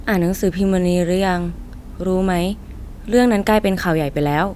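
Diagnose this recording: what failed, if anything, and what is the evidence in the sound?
Nothing failed: the sound offers no evidence of a fault at any stage of the recording chain.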